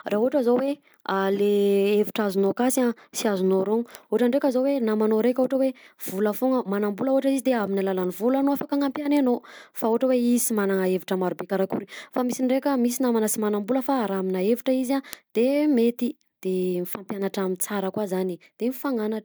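Word clock ticks run from 0.22 s to 18.87 s, roughly every 0.7 s, about thirty of them. The receiving clock drifts against the sender's by around 30 parts per million, so each slip drops or repeats one sample, putting a tick into the speech.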